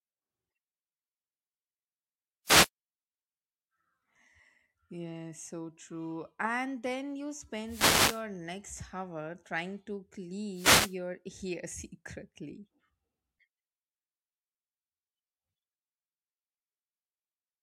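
Speech with wireless microphone noise hits at 2.45 to 2.69 s, 7.65 to 8.23 s and 10.53 to 10.96 s. Each is a burst of static. The FM radio link fades and receiver noise swamps the signal.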